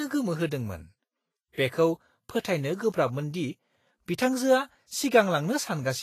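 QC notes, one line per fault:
Throughout: likely Vorbis compression. Nothing above 14.2 kHz, and coarse treble quantisation turns fine detail into plainly audible hiss and grain, which fits roughly 31 kbps.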